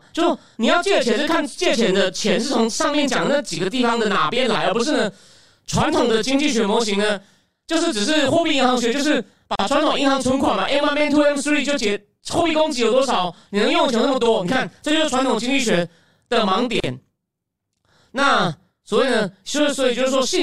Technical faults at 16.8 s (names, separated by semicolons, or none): channel delay (doubling); gap at a join of encoded pieces